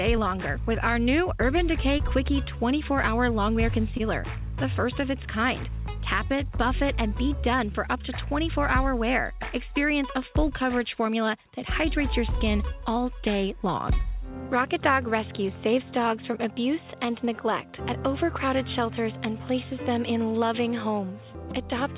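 Around 1.98 to 2.01 s and again at 3.97 to 4.01 s there's short concealed packet loss. About 20 ms of audio never arrived in time, and the receiver papered over it by extending the preceding sound for roughly 12 ms and 20 ms, so you get a quick smear or wobble before it blends back. The call path tops out at 4 kHz, which fits a G.711 mu-law link.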